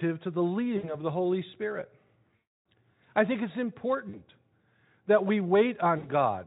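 At 0.77 s after "to the", 2.36 s before "I think it's", 4.09 s after "I think it's", and 5.97 s, the speech briefly smears into a fading buzzy tone or coloured noise. This is VoIP packet loss concealed by the speech codec. The decoder stretches its last pitch and filter through the missing audio, about 60 ms, 300 ms, 40 ms and 60 ms long.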